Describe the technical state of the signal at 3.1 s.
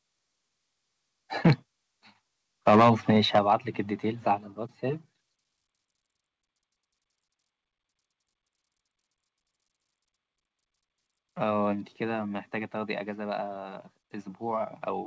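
At 3.1 s the speech has a harsh, crackling edge on its loudest peaks, within a stretch from 2.67 to 3.53 s. This is likely microphone overload: the input runs about 8 dB too hot, flattening the tops of roughly 5 percent of samples at the converter's limit.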